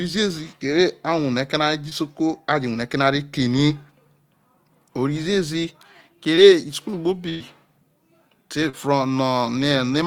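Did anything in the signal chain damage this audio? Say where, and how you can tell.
Yes, the damage happened at the network stage of a call. Three brief smears interrupt the speech, at 1.89 to 1.93 s, 6.35 to 6.39 s and 8.69 to 8.75 s, each sounding like a small wobble rather than a clean cut. This is short concealed packet loss. About 20 ms of audio was lost at the first two points and about 40 ms at the third. The receiver extended the preceding sound across each hole and then blended back into the real signal.

A longer fault occurs at 7.29 to 7.42 s. The sound stretches into a held, fading tail with no silent gap, and then the speech picks up further along than it should. This is a burst of packet loss. Roughly 100 ms of audio never arrived in time, and the decoder synthesised about 107 ms of continuation from the last good sound, decaying it as the gap went on. The stretch between the loss and the resumption is missing.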